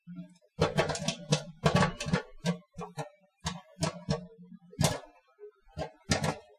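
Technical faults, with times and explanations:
Nothing technical stands out here; the sound carries on without any glitch or hiccup worth flagging.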